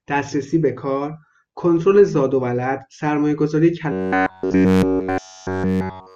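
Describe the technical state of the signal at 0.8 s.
The audio is intact at 0.8 s, with no fault in the signal at that point.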